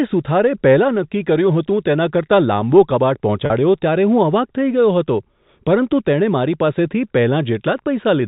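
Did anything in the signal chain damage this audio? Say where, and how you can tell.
Yes, at the network stage: packet loss with pitch repetition from 3.46 to 3.50 s. About 40 ms of audio is missing, consistent with two 20 ms packets. The receiver bridges the gap by looping the last pitch period, giving a briefly held, buzzy sustain before the G.711 band-limited speech resumes.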